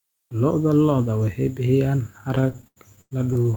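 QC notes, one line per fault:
2.35–3.56 s, repeated stalls (stutter): the speech drags and stutters to the end, with 19 brief holds where the last sound is stretched on, the longest about 99 ms and the longer ones fading. These fills total about 379 ms, roughly a third of the span, yet nothing is skipped. Packets were arriving late or slower than playback, so the jitter buffer kept running dry and the receiver extended the previous audio until more arrived.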